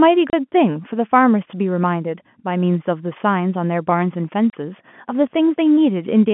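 Packet loss filled with silence at 0.30 s and 4.50 s: each 30 ms gap, which fits one lost packet, drops the telephone-band speech to silence with hard edges.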